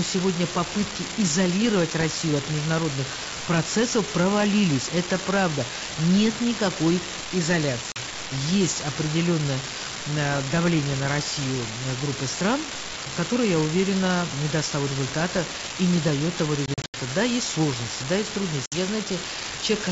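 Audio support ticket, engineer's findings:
Steady crackle/fizz under the whole clip, audible in pauses too, with uniform spike size. Unreliable data bit: one marginal data line flips a single bit in a random share of samples, so every error is a spike of identical size and the fizz persists with or without speech.

Hard-edged dropouts to silence, three events. 7.92–7.99 s: 40 ms lost, about two packets, just before "есть определенное э давление". 16.66–16.97 s: 160 ms lost, scattered across 280 ms with a longest run of 80 ms, around seven packets, just after "и не дает того". 18.66–18.75 s: 60 ms lost, about three packets, just after "есть сложности да есть". Packet loss on the ADPCM call: gaps filled with silence, then the decoder's adaptive predictor and step size resume out of step with the sender's until they reconverge. G.722 path at 64 kbit/s gives wideband speech with faint or no coding damage.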